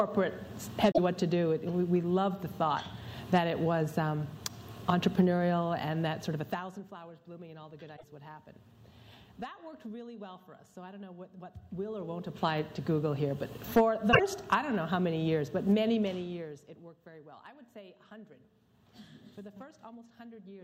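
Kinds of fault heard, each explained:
Damaged data in a compressed stream: Corrupted bytes in the encoded stream make the decoder misread frames, lose sync and hunt for the next frame header. Each time this produces a brief chirp or blip of about a tenth of a second, near 0.9, 7.9 and 14.1 s.
Zipper noise: The gain is changed in 1 dB jumps with no smoothing, about 20 times a second, so every jump leaves a small click. A rapid ticking rides on the sound as the level climbs about 15 dB near 11.5 s and drops about 20 dB near 15.9 s.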